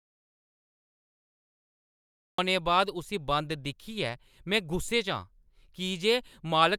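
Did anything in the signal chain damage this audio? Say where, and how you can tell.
Yes. The input feed was likely lost before the recorder or encoder, perhaps through a disconnected device or failed link, while silence kept being written. The speech opens with an audio dropout to silence, already under way at the start and lasting until 2.38 s, with no room tone at all.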